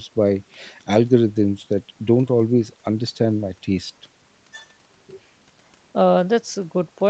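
No technical faults occur anywhere in the speech, which has passed through ordinary call microphone processing and a WebRTC call path that limits it to about 8 kHz.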